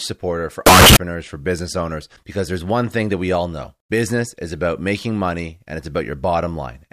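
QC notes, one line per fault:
0.66–0.96 s, signed and unsigned mixed up: after "supporter for", the speech bursts into a harsh, very loud roar until "for business owners because". The likely cause is 16-bit samples read with the wrong sign convention, flipping the top bit, so every zero crossing jumps across the whole range and even quiet moments blast at full loudness.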